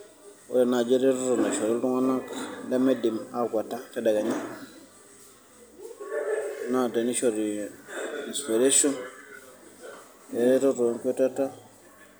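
Nothing in the speech stood out as a technical problem on listening.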